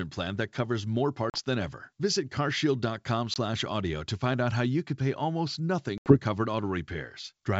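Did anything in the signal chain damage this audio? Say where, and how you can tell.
Yes, the damage comes from the network: packet loss on an ADPCM call, over a G.722 wideband link whose clean top end up to 7 kHz shows the codec itself is fine. Hard-edged silent holes appear at 1.30 to 1.39 s, after "plan that covers more" and before "than ever" (40 ms gone, about two packets); at 3.34 to 3.37 s (20 ms, about one); and at 5.98 to 6.17 s, after "you could pay almost" (80 ms, about four). Each gap also desynchronises the receiver's adaptive predictor and step size, so speech re-enters slightly distorted before settling.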